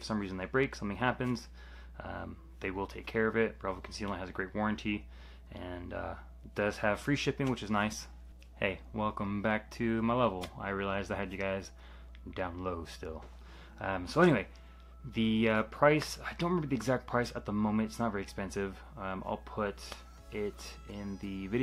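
No technical faults are audible.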